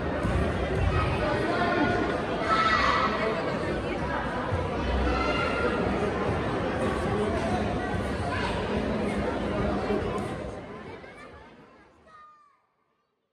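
No technical faults are audible.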